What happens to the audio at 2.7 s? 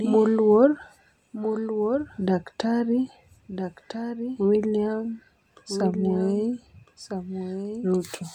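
A doubled audio track runs throughout: a dry copy about 10 dB quieter trails about 1.5 s behind, likely from a slower second capture path. On a spectrogram it shows as fainter, shifted repeats.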